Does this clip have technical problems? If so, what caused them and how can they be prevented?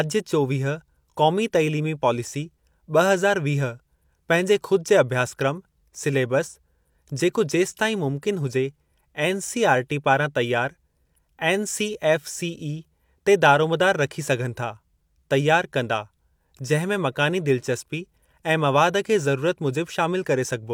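No, no technical faults detected.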